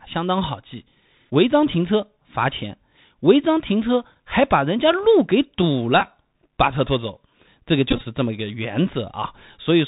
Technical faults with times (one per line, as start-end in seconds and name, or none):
0.00-9.87 Bluetooth CVSD headset codec
6.00 Bluetooth headset packet repeated
7.91-8.01 Bluetooth headset packet repeated